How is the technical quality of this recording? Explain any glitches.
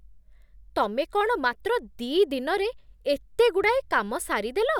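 No audible glitches or faults.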